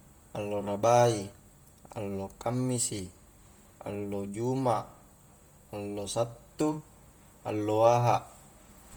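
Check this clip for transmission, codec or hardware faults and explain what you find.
One codec fault runs through the whole recording. Throughout, the speech carries a breathy, grainy edge on its upper frequencies, with heavy codec damage, even though the band extends to about 20.1 kHz. This is likely Bluetooth LC3 compression, the LE Audio transform codec, working in 10 ms frames at a rate that points to around 32 kbps. At that budget it zeroes much of the upper spectrum and refills it with shaped noise, producing the grain.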